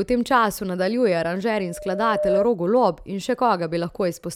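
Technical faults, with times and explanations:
1.60–2.47 s, loudspeaker feedback squeal: just after "v tem času nadaljuje", a steady 602 Hz tone swells over about 0.7 s to roughly 5 dB above the speech. The microphone is re-amplifying its own loudspeaker, and at that frequency the loop gain exceeds one.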